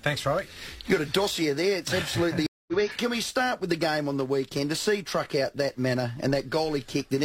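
At 2.47 s there is a stream reconnect. The connection dropped and the player restarted its decoder mid-stream. About 212 ms of silence follows. At 2.73 s the sound resumes roughly 150 ms further on, so a short stretch is skipped.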